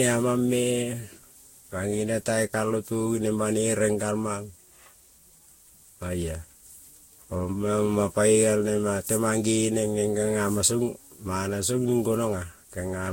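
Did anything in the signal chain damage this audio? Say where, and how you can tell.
Yes. Throughout the speech the sound is swirly and hollow, with smeared consonant attacks and a watery texture, and nothing is present above about 16.6 kHz. That is more damage than a single low-bitrate pass would leave, which points to generation loss at the codec stage. The audio was likely decoded and re-encoded around seven times, each pass quantising on a shifted frame grid. The character fits Vorbis at roughly 60 kbit/s.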